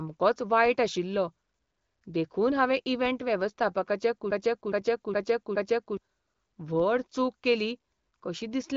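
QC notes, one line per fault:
4.31–5.97 s, broken-record loop: the stream most likely stalled and kept replaying the last fragment it held, so a 0.42 s piece of speech repeats exactly, back to back, four times across about 1.7 s. The audio that should have filled that span never arrives, and the speech jumps forward when normal playback resumes. The identical repeats give the stuttering, stuck sound of a skipping record.
6.80 s, DC step: the waveform's zero line jumps suddenly, as when a converter recalibrates or an offset input is switched in, just before "चूक केली". The shift is heard as a single low thump while the speech carries on unchanged, and the offset then decays away as a 20 Hz high-pass filter pulls the signal back to centre.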